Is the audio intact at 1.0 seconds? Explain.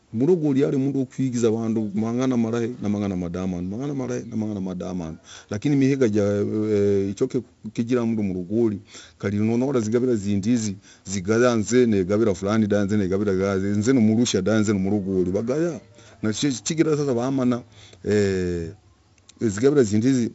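No. At 1.0 s, as throughout the speech, 4-bit ADPCM compression coding each sample as a coarse step from a prediction leaves gritty hiss riding on loud syllables and roughening attacks, with nothing above 7.7 kHz. Unlike steady bit-depth noise, this grit rises and falls with level.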